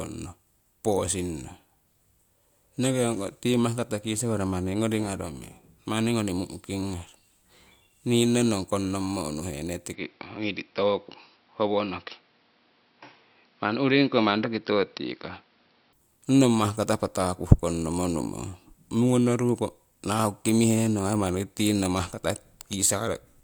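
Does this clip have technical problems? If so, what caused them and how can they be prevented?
Yes. Input switched to a poorer device, from 9.93 to 15.93 s. The speech loses everything above 5.6 kHz and turns dull, with a new noise floor about 40 dB down but no gap or level jump. The likely cause is a swap to a narrower-band microphone. The dull sound begins just before "ong nong mahkata patakuh". Fixing the input device in the recording settings and turning off automatic device switching prevents this.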